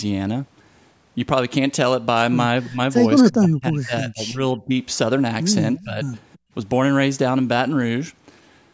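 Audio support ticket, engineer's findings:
Speech suppressed in double talk. Level dips at 2.69–2.79 s (about 10 dB), 3.31–4.72 s (about 25 dB, roughly a second of speech hit), 5.79–6.03 s (about 15 dB). Likely the echo canceller during overlap with far-end audio. It could not separate near-end talker from loudspeaker echo. Attenuated both. Deepest and longest cut in the middle stretch.

Echo leak. Faint delayed copy of speech at 5.78–5.83 s and 6.34–6.38 s. Short scraps only. Sits about 30 dB and about 35 dB below the speech. Delay 334 ms on both. Likely residual echo from a loudspeaker endpoint. Its canceller missed part of the mic pickup and returned it.

Background gated by the echo canceller. Room sound drops about 40 dB at 6.38–6.52 s, roughly 150 ms. Follows directly after the second leak. Canceller clamped the mic hard while loudspeaker played. Background returns when it releases.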